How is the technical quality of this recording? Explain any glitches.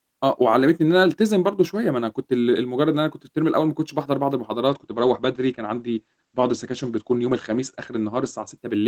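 The recording degrades partway through and does not recover. A call bitrate drop begins at 4.68 s and runs to the end. The connection's bandwidth estimate fell, so the encoder went from 32 to 14 kbps. It codes the speech more coarsely and cuts content above 8 kHz, down from 20 kHz, so the top end is lost.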